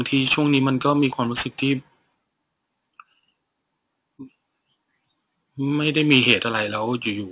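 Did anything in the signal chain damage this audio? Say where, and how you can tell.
Yes. Aliasing runs through the whole clip and comes from the sample-rate conversion stage. Sibilants sound gritty and metallic, and the spectrum runs hard up to a 4 kHz edge. That points to a drop from 44.1 kHz to 8 kHz with no anti-alias filter. Energy above 4 kHz was not removed, so it folded back below the edge as unrelated tones, about 20 dB under the speech.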